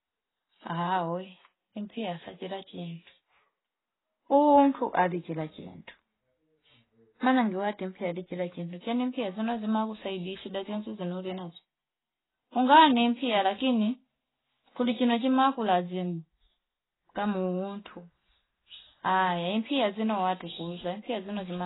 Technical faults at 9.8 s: AAC compression

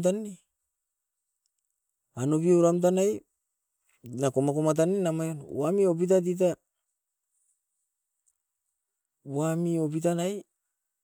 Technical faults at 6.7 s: none

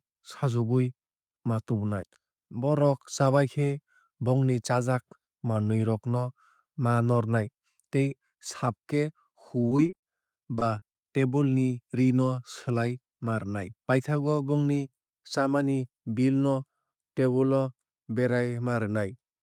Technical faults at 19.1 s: none

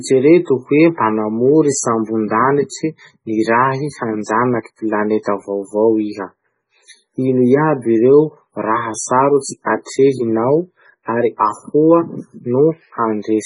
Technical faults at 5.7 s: MP3 compression

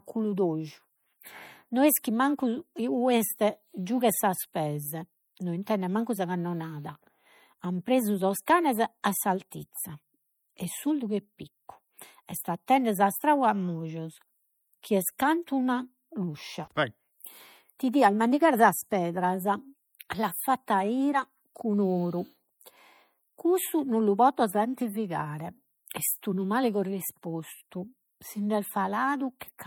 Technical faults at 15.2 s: MP3 compression; pre-echo

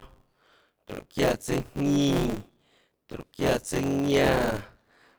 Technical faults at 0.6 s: buffer tearing

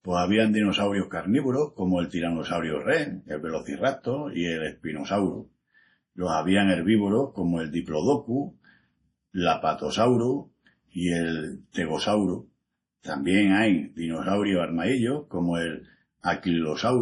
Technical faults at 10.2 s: low-bitrate audio saved at a high bitrate

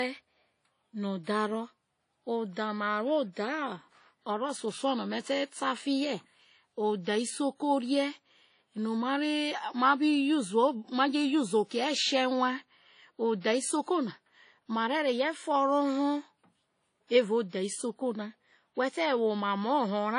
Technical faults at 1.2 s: WMA compression; pre-echo

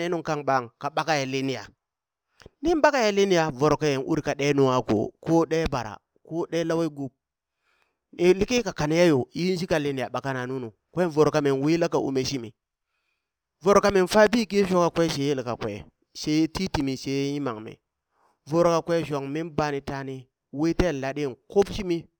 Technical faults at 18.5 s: imaging from linear upsampling

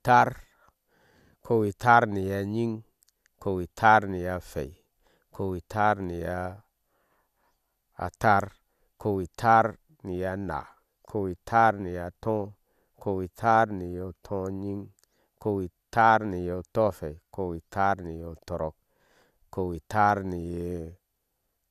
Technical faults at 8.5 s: none

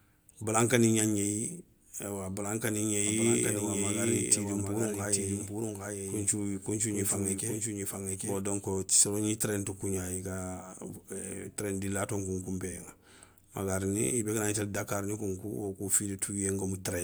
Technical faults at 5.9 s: doubled audio track

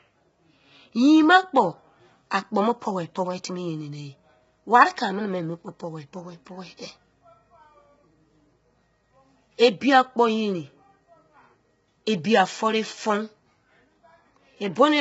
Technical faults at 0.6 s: low-delay AAC compression

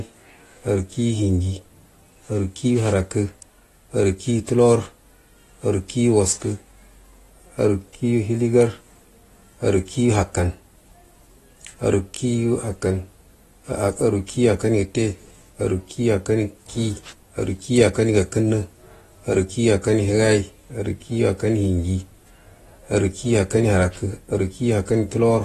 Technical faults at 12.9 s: AAC compression

